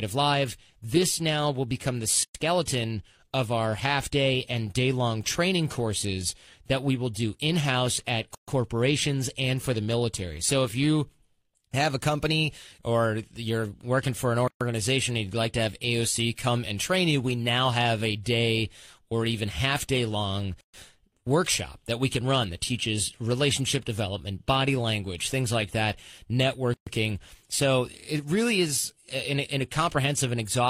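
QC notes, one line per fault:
2.23, 8.35, 14.48, 20.61, 26.74 s: gap at a join of encoded pieces, silences of 115 ms then 130 ms about every 6 s, where separately encoded pieces were joined untrimmed.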